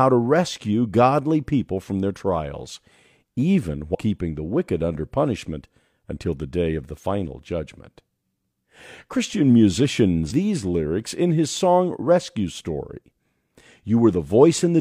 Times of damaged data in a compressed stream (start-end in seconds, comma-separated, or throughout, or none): 3.90-3.95, 10.27-10.32